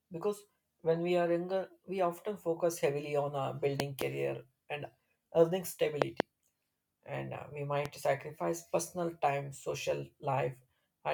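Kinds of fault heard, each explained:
Loud pop: sharp thumps, two of them doubled, jump well above the speech, which carries on underneath. Likely a voltage spike from a plug, switch or static.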